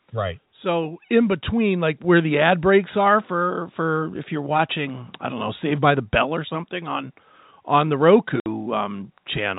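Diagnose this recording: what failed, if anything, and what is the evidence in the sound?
Speech and background jump louder together at 1.02 s (about 6 dB) and 2.04 s (about 3 dB): microphone volume stepped up by the call processing's input gain control.

A 60 ms silent gap at 8.40 s, after "something on on the": packet loss filled with silence on the network, which fits three 20 ms packets.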